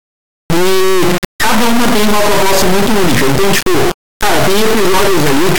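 From start to finish the clip shows an integer read as float fault: samples stored as 32-bit integers are being interpreted as 32-bit floating-point values. Those bit patterns decode to numbers that are either vanishingly small, invalid, or enormously beyond full scale, so the output slams between silence and the clipping ceiling. The speech is replaced by an extremely loud, harsh buzzing square wave that falls away to silence in the quietest moments.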